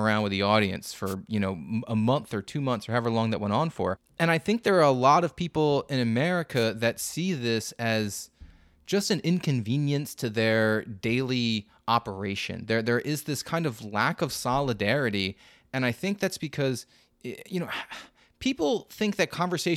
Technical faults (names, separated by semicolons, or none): wireless microphone noise hit